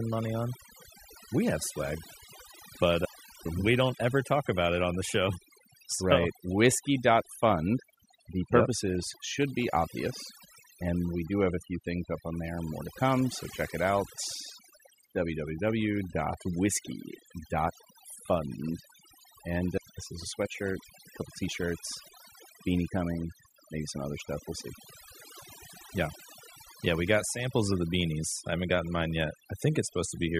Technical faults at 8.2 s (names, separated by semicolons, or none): overdone noise removal